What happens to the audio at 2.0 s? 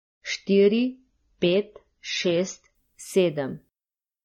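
At 2.0 s you're still in the opening stretch, 0.0 to 2.75 s, where the adaptive stream is starting at a low bitrate. The player grabbed a lean version to get going fast, so nothing comes through above about 6.9 kHz and the speech sounds dull, with more obvious codec smearing. It's consistent with something around 24 kbit/s AAC. At 2.75 s it jumps to a much fuller rendition, which sounds like roughly 96 kbit/s, with no gap.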